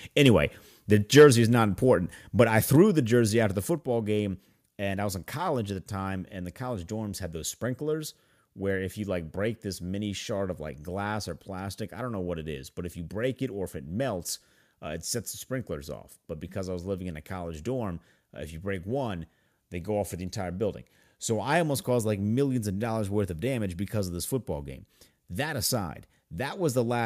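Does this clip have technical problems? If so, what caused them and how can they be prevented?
Yes. Two peaks crackle harshly, at 0.25 to 0.27 s and 1.16 to 1.27 s, just before "is not important". Their tops are flattened. This is likely microphone overload, about 2 dB and 5 dB past the converter's limit. Lower the microphone gain so peaks stay under full scale.

The level drops suddenly three times. It falls by about 2 dB at 1.19 s, during the distorted peak, and by about 3 dB at 2.76 s, just before "the jersey after the". It falls about 4 dB at 3.78 s, before "game and I was". This is likely the call software stepping down the microphone volume in response to clipping. Set a safe input level beforehand so the software never needs to react.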